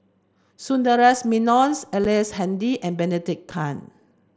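At 2.04 s and again at 3.51 s the speech has a tiny hole, about 7.5 ms long, which fits a single lost frame on the mSBC link. This is unconcealed Bluetooth headset packet loss: the missing frame was filled with silence or an idle pattern rather than patched, so each gap starts and ends abruptly. Concealed loss would smear or repeat the preceding sound, whereas here the audio simply blinks out and returns.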